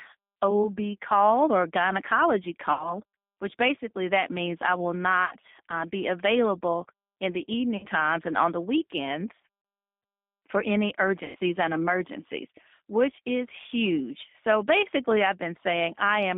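Throughout, the speech passes through the G.729 codec at 8 kbit/s. Its frame-by-frame pulse-and-filter rebuild gives a plainly rough, synthetic edge, and a spectrogram shows energy confined to roughly 200 Hz to 3.6 kHz, with nothing above.

VoIP packet loss concealed by the speech codec occurs at 2.73–3.01, 5.25–5.34, 7.77–7.86, 9.62–9.65 and 11.25–11.36 s. Each gap loses 60, 60, 60, 30 and 90 ms of audio. The decoder extends its last pitch and filter into a buzzy tone or coloured noise that fades. The waveform shows a decaying stretch, and the spectrogram shows smeared harmonics before the signal recovers.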